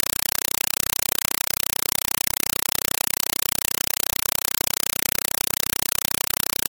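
From the first moment to the last, the speech is gone and you get a compressed stream played as audio. A Dolby Digital (AC-3) feed has gone down the digital link and been treated as plain samples instead of being decoded. So each coded frame comes out as a loud burst of noise about 4 ms long, then silence from the padding. That repeats at 31.25 Hz, giving a harsh, rapid chattering static.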